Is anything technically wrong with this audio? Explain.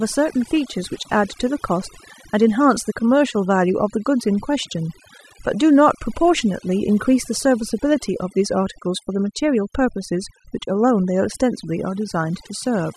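Yes. Throughout the speech, the background drops and breaks up into twinkling specks. This is overdone noise removal: a noise reduction process set too strong, cutting frequency bands near its noise estimate along with quieter parts of the voice.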